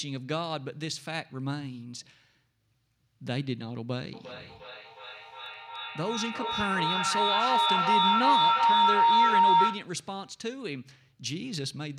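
From 4.13 to 9.99 s, feedback howl builds near 1 kHz, pulsing roughly every 400 ms and reaching about 9 dB above the speech. The microphone-to-loudspeaker loop gained level on each pass until it was broken.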